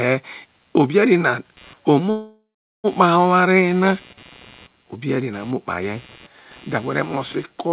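Computer activity noise runs under the speech for the whole clip: a buzzing pulse repeating around 150 times a second, roughly 30 dB below the speech. Processor or peripheral load changes shift the audio circuit's shared ground, so the buzz follows the computer's activity rather than the speech.

From 2.1 s to 2.86 s there is a call audio freeze, likely from packets stalling until the jitter buffer emptied. The last sound is stretched into a fading buzz that drops to silence for about 0.42 s, then the speech resumes where it stopped. The inserted gap is about 0.74 s, and nothing is lost. The call codec's band limit, with no content above 4 kHz, is consistent with a 64 kbps narrowband codec.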